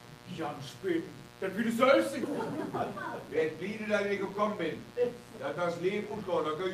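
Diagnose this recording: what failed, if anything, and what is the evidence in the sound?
Analogue wiring is the stage for the first fault, a mains buzz running through the whole recording. It is a steady, raspy buzz at roughly 20 dB below the programme, built on 60 Hz with harmonics reaching well into the kHz range. That spectrum comes from sharp switching spikes, such as those from a dimmer, a rectifier or an unshielded run, coupling into the signal path twice per mains cycle. It points to a grounding or shielding problem rather than anything digital.

The second fault is a skip ahead at the network or jitter-buffer stage. Between 2.23 s and 2.25 s playback jumps forward with no silence or fill inserted, and the material on either side is butted almost directly together. Roughly a second of audio is missing, and playback delay drops by about the same amount. This fits a buffer that overflowed and discarded queued audio to catch up with later packets already waiting.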